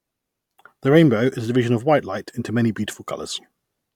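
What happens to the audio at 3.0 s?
Nothing goes wrong at 3.0 s; the speech runs on intact through that moment.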